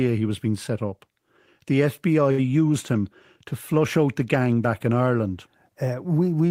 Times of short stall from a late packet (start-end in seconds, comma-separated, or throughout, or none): 2.31-2.40